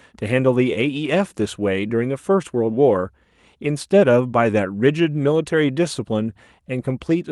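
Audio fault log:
No faults heard; the call path sounds as expected.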